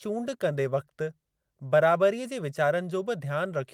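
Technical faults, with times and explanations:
No technical faults can be heard anywhere in the speech. There is nothing to list with a time or an explanation.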